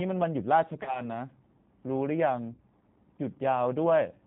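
G.729 codec damage runs through the whole speech clip: at 8 kbit/s the G.729A coder rebuilds each 10 ms frame from a vocal tract filter, pitch predictor and a few pulses, so nothing above 4 kHz survives and the speech sounds plainly rough and synthetic.

VoIP packet loss concealed by the speech codec appears at 0.83 to 1.03 s and 2.53 to 2.61 s. The gaps suggest roughly 30 ms and 50 ms of missing audio. The decoder extends its last pitch and filter with falling gain, smearing the speech into a fading buzzy tone or coloured noise that stays weak or distorted after recovery.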